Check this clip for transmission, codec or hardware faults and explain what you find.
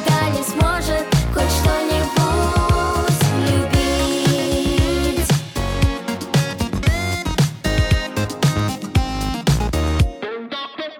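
No faults are audible here.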